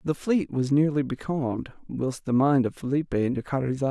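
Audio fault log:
No technical faults are present anywhere in this speech signal.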